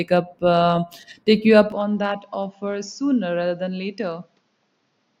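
At 1.72 s the speech turns duller and about 10 dB quieter with no gap, nothing above roughly 7.1 kHz and a faint new noise floor, around 45 dB down, through to the end. This points to an input likely switched to a poorer device.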